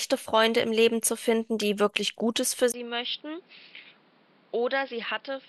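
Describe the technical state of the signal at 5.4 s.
At 5.4 s the speech sounds duller and more boxy, with nothing above 5.4 kHz. The change begins after a brief 20 ms gap at 2.72 s and lasts to the end. The level sits roughly 10 dB lower. New background noise rides about 30 dB below the speech. The likely cause is an input switched to a poorer device with a narrower band.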